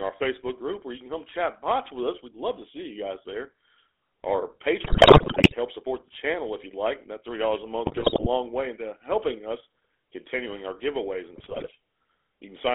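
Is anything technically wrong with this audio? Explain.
Yes. Two problems are audible.

Through the whole clip the speech has a buzzy, gravelly roughness and sounds boxed in, with nothing below about 300 Hz or above 3.5 kHz. This is the GSM full-rate codec. It models the vocal tract as a filter and drives it with a sparse, regularly spaced pulse train instead of the real excitation, which fits the 13 kbps full-rate coder. That coarse excitation is what grinds the voice, and the damage is plainly audible.

At 4.84 to 5.55 s, 7.86 to 8.28 s and 11.36 to 11.68 s the speech breaks into squawks, pops and gargling. These are GSM bit errors: corrupted bits reach the decoder and scramble its filter, pitch and gain values, so individual frames come out with a bent spectrum or a sudden jump in level. The first burst is the longest and the most mangled.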